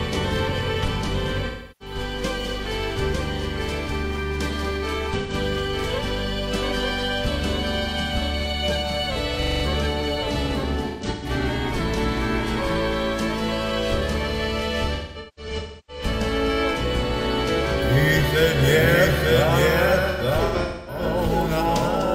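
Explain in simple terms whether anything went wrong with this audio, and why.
Yes, three things went wrong. Throughout the clip there is a doubled audio track. The same sound was likely recorded a second time through a slower path, so a slightly quieter copy trails about a second behind the original, clean and without echo, like a ghostly repeat.

There is also AAC frame loss with concealment. Chunks of the compressed stream went missing, and the player guessed at them from the last good sound. This happens at 1.46–1.95 s, 5.17–5.34 s, 10.89–11.30 s, 14.95–16.03 s and 20.10–21.02 s. In each spot the audio turns smeared, noisy or hollow, and the longer gaps fade toward silence before the sound returns.

Finally, at 9.43–9.64 s there is a system hang loop. The computer froze briefly while the sound hardware kept replaying the same 43 ms scrap of audio, about 23 times a second, which comes out as a quick mechanical stutter.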